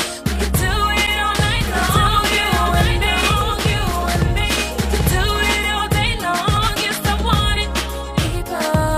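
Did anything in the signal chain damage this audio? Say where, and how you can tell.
Yes. A doubled audio track runs from 1.35 s to 5.49 s: a full-band copy trails the original by about a second and a half, a few dB quieter, with no decay or room colour, and it starts and stops abruptly. The likely cause is a duplicate routing or editing stage.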